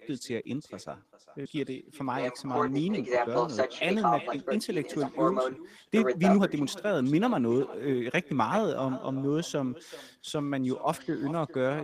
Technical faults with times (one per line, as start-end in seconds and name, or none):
0.00-11.84 echo with no canceller
1.45-1.47 skip ahead
1.55-10.36 jitter buffer speed-up